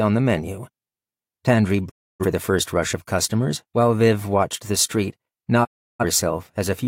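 Speech with two digital broadcast dropouts, 1.88–2.25 s and 5.63–6.04 s, where the receiver mutes on failed frames. A 20 ms fade into true silence, unlike masked network gaps, loses about 0.3 s each, fitting several corrupt frames.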